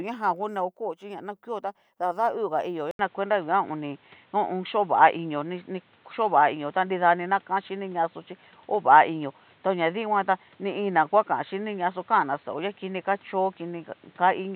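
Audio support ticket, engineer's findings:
Speech turns dull and boxy from 2.91 s to end, after an 80 ms dropout. Likely input switched to a poorer device. Spectrogram: nothing above 4.2 kHz, new noise floor about 35 dB down. Waveform: gap, then level shift of several dB.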